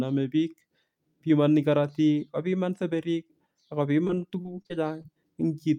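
From 4.07 to 5.06 s, repeated packet loss (robotic sound): nine gaps, the longest 34 ms, are patched by extending prior audio. The speech sounds choppy, with smeared, repeating blocks on a spectrogram.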